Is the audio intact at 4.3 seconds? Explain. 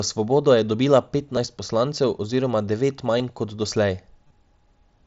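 No. From 4.27 to 4.30 s there is concealed Bluetooth headset packet loss. About 30 ms went missing, which fits a short run of lost packets. The receiver filled the gap by repeating the best-matching piece of the preceding audio, so it sounds like a brief buzzy tone at full level with a slight warble where real sound resumes. On a waveform it appears as a repeating cycle with a flat envelope, and on a spectrogram as evenly spaced harmonic lines.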